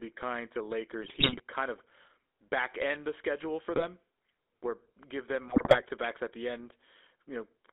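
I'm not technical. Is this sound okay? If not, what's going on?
No. The whole recording has the steady buzzy, gravelly roughness of the GSM full-rate codec used in early mobile phones, which also cuts off everything above about 3.7 kHz, so it sounds muffled.

On top of that, GSM bit errors cause brief squawks, pops and gargling where the signal got corrupted: 1.02 to 1.41 s, between "kind to" and "kind of"; 3.75 to 3.85 s, after "end the schedule for"; and 5.48 to 5.83 s, between "where give them" and "to backs at the". Unlike the constant codec roughness, these come in short bursts, and the sound turns garbled rather than going silent.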